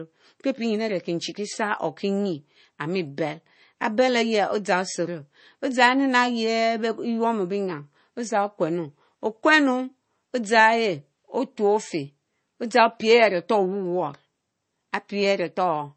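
Throughout the clip, the speech carries plainly audible MP3 compression damage. The treble stops abruptly, with nothing above 8.3 kHz. The sound has a watery, swirling quality. S sounds turn metallic and chirpy, and consonant attacks smear. The likely cause is an MP3 encoder starved of bits. It cut the top band at a fixed point and dropped weak frequency components that flicker on and off between frames. The damage fits a very low bitrate of about 32 kbps.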